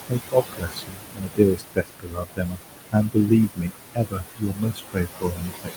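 Noise suppressor artifacts run through the whole clip. The suppressor pulls down whatever it judges to be steady noise by about 20 dB, frame by frame, so the room noise, which sits only about 8 dB below the speech, dips in the gaps and swells back under each phrase. That pumping sets it apart from a fixed gate.

Speech cut by the noise suppressor starts at 0.08 s and lasts to 2.6 s. Here the suppressor mistakes speech for noise and drops it by up to about 22 dB, so around two seconds of quiet sound come out swallowed. Shorter cuts follow from 2.92 to 3.31 s and from 3.47 to 3.72 s, each about 20 dB deep and touching only a fraction of a second. A final stretch from 3.94 s to the end drops by up to about 21 dB. Unlike a dropout, the sound fades rather than vanishing abruptly.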